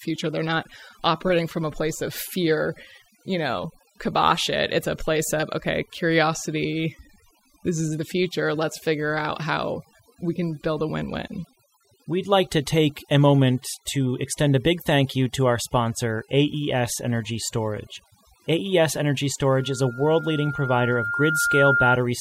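Across the whole speech clip, overdone noise removal cuts narrow frequency bands hard whenever they sit near the estimated noise floor, taking quiet parts of the voice with them. The background drops and breaks up into twinkling specks.

From 19.56 to 21.99 s, a loudspeaker feedback squeal appears: the microphone picks up its own loudspeaker, and at 1.4 kHz the loop gain exceeds one. That single tone swells over about two seconds into a squeal somewhat louder than the speech.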